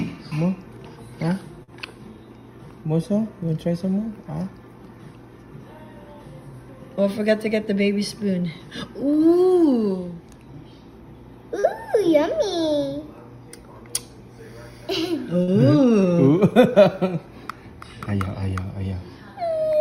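Brief smears near 1.63, 11.59 and 15.43 s come from short concealed packet loss: about 40 ms went missing each time, and the receiver extended the preceding sound to bridge the gap.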